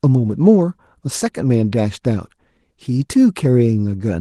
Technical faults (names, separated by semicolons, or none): none